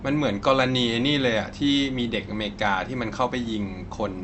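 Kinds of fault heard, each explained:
No faults found; the speech shows only the normal character of a WebRTC call path, with content rolling off around 8 kHz, consistent with an Opus codec at its usual call settings.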